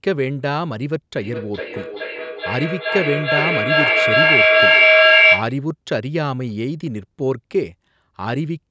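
From 1.18 s to 5.62 s the speech keeps coming back at itself, each repeat arriving roughly every 0.4 s and sounding thinner and more ringing, with nothing above about 8 kHz. Instead of fading, the repeats build until they peak at about 9 dB above the speech. This is feedback echo between two devices: a second device in the same room replays the call, its sound re-enters the microphone, and neither echo canceller recognises it.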